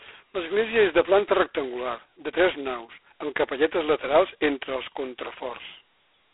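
G.726 ADPCM damage runs throughout the speech at 16 kbit/s, which points to two bits per sample coding only the error of an adaptive prediction. A harsh, rasping hiss swells and falls with the speech level, within a 300 Hz to 3.4 kHz telephone band, with nothing above 3.8 kHz.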